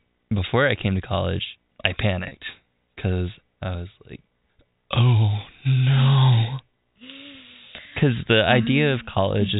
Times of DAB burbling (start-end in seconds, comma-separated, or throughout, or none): none